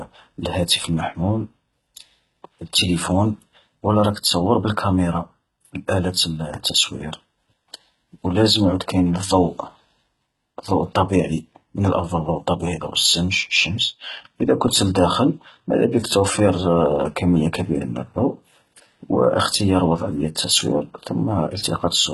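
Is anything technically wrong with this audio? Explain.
Yes. Throughout the speech, the treble sounds gritty, metallic or lispy on s sounds, with heavy codec damage and nothing above 11.8 kHz. The likely cause is HE-AAC compression, and the sound fits HE-AAC v2 at a very low rate of around 16 kbps. Only the lower spectrum is actually coded. The upper range is rebuilt by copying lower bands upward and shaping them with a coarse envelope, so harmonics fail to line up across the crossover.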